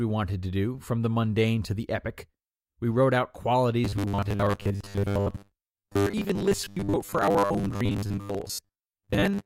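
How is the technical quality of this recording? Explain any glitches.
The recording has one significant fault. From 3.85 s, right after "wrote out", to the end of the clip, the speech takes on a robotic sound from repeated short buffers. A rigid, metallic buzz at 100 Hz sets in, though the speech contour remains roughly traceable. The likely cause is audio arriving too slowly, with playback looping the last 10 ms block to fill the gaps. Most of the time is filled with repeats, so that loop rate becomes the buzz frequency.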